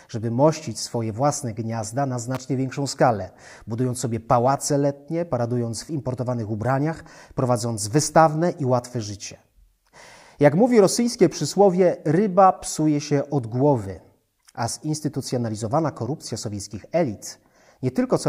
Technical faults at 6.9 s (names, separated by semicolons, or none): none